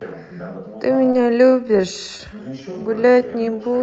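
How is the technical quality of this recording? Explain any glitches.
The recording has two kinds of glitches, both heard through call-style audio whose top end stops at about 8 kHz.

From 0.83 s to the end, the pace suddenly drops to roughly two-thirds speed (0.676×) while the pitch stays the same. This is a time-stretched section, likely from software lengthening the audio by repeating short pieces. That is why it drags. Slow playback would lower the pitch, and here the pitch doesn't change.

At 1.11 to 1.15 s and again at 2.17 to 2.21 s, there is short concealed packet loss. About 20 ms of audio never arrived, and the receiver filled each gap by extending the preceding sound before blending back in. Each one is heard as a brief smear or wobble rather than silence, which distinguishes it from a plain dropout.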